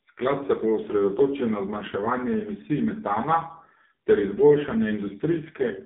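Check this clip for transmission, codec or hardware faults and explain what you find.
One codec fault runs through the whole clip: AMR narrowband mobile codec damage. AMR-NB drives a vocal tract model with a few pulses per 5 ms. Here it sounds heavily buzzy and synthetic, confined to roughly 200 Hz to 3.6 kHz with nothing above 3.7 kHz, which fits its low 5.15 kbps mode.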